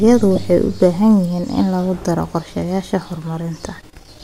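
A speech clip with lost LE Audio frames at 0.36 to 0.38 s, where the LC3 decoder patched roughly 15 ms, consistent with two dropped frames, using the previous spectrum with randomised signs, leaving a brief noisy smear; the lossy compression underneath sounds only lightly affected.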